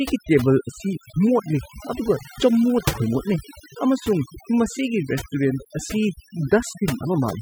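Overdone noise removal runs through the whole speech clip. A noise reduction stage set far too aggressively pulls individual frequency bands down to nothing whenever they sit close to its noise estimate, and softer parts of the voice get caught along with the noise. Between phrases the background drops to near silence sprinkled with twinkling, chirpy specks. Unlike a plain low-pass or band-limiting fault, the loss keeps shifting band by band from moment to moment.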